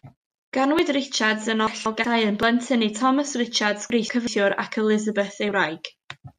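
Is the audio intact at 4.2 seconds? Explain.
No. From 3.90 to 4.27 s, the speech has chunks out of order. One 186 ms chunk arrives late and plays after the chunk that should follow it. Nothing is lost, but the order is swapped, so the moment sounds jumbled, with three hard joins.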